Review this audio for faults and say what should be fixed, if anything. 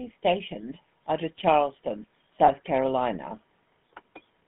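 GSM full-rate codec, throughout: the sound has the buzzy, gravelly roughness of a coder that models the vocal tract and drives it with a thinned, regularly spaced pulse excitation. The damage is plainly audible, the band runs from 150 Hz to 3.5 kHz, and this fits 13 kbps GSM full rate. Prevent it by capturing the source before the phone network or by using a wideband codec.

Lost GSM frames, 2.46 to 2.50 s: the sound briefly freezes into a rough, metallic ring as the decoder repeats the last good frame's settings. Its length fits a single dropped 20 ms frame. Prevent it by improving the radio link or adding error protection and jitter buffering.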